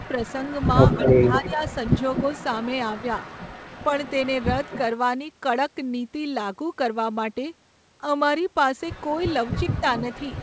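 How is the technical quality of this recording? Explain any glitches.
The recording carries call artefacts: an echo leak at the start and end, and a brief dip in speech where both ends talked at once. The audio is band-limited with nothing above 8 kHz, which fits a wideband call codec path.

Echo leak runs from 0.0 to 4.81 s and again from 9.1 s to the end. A delayed copy of the speech trails the talker by about 244 ms in the first stretch, roughly 15 dB down, and by about 264 ms at the end, much fainter at around 25 dB down. The likely cause is a loudspeaker at the far end whose echo canceller left part of the microphone pickup in the return path, so the talker hears themselves come back late.

Speech suppressed in double talk occurs between 1.25 and 1.61 s, inside the first echo stretch. For about 150 ms in total the speech level sags, by roughly 5 dB at its deepest. This likely comes from the echo canceller failing to tell the local talker from loudspeaker echo while both sides were active, so it attenuated everything at once and took the talker down along with the echo.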